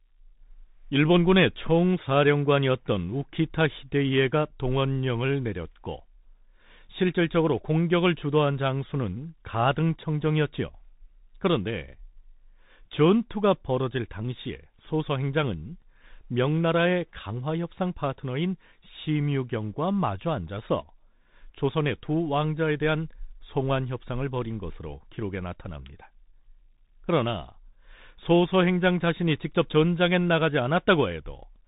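From start to finish the speech carries the sound of a Bluetooth CVSD headset codec, with damage that is plainly audible. Nothing above about 3.8 kHz survives, and a granular hiss sits under the speech. Sibilants turn scratchy because the one-bit up-or-down encoder, which fits a 64 kbit/s link, cannot adapt its step fast enough for loud high content. That grainy, slope-overloaded edge is what separates it from a clean band-limit or ordinary telephone filtering.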